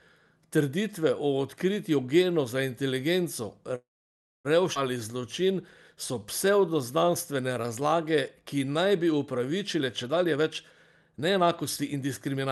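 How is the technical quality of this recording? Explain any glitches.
Quality is uneven. The speech has the character of a call carried over Opus at a bitrate near 40 kbps, with the top end stopping around 12 kHz. On top of that, there's a cluster of network-timing glitches from about 3.8 s onward.

Call audio freeze, 3.75 to 4.47 s: The sound stalls for about 0.7 s. A short tail carries on past the stall point and then dies away, leaving about 0.61 s of silence. The likely cause is packets getting held up so the jitter buffer ran dry, and the receiver padded the gap until data arrived. When playback resumes it picks up where it stopped, so nothing is lost, but everything after it now runs roughly 0.69 s late.

Skip ahead, 4.75 to 4.77 s: Right after that, playback lurches forward. Around 0.4 s of speech just isn't there, and the two sides are butted together with almost no gap. This is the receiver dumping a chunk of audio, in transit or from an overfull buffer, while later packets were already queued. 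It claws back roughly 0.4 s of the delay the freeze had added.

Jitter buffer slow-down, 4.97 to 5.52 s and 6.14 to 9.57 s: The speech drags at the same pitch. The first stretch plays at about 92% speed and adds 49 ms. The second is longer, at about 91%, and adds 311 ms. Here the receiver is repeating individual pitch periods and slivers of pauses to rebuild its reserve. You hear it as stretched-out sounds.

Jitter buffer speed-up, 9.75 to 10.44 s and 11.18 to 12.46 s: Now it swings the other way and the speech sounds hurried, still at normal pitch. The first burst runs at about 126% and the second at about 116%, each shaving roughly 0.2 s. The buffer has more queued than it wants, so it snips out short runs of one or a few pitch periods back to back to bring the delay down.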